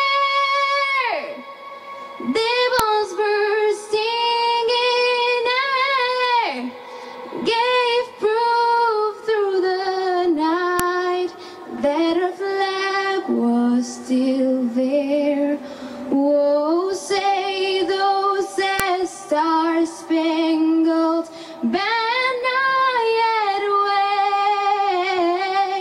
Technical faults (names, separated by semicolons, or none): file header played as audio